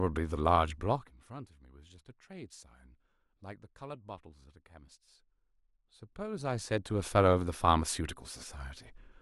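No technical faults are audible in the speech; the signal holds together without any disturbance at any point.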